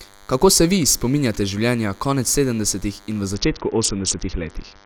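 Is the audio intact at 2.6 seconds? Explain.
No. At 2.6 seconds, as across the whole speech clip, a thin, steady buzz sits under the speech at roughly 30 dB below it, pitched at 100 Hz and rich in harmonics. This is DECT cordless phone buzz: a nearby DECT handset or base station transmits a brief radio burst every 10 ms, and the audio circuitry rectifies those bursts, turning the 100 Hz repetition into an audible buzz.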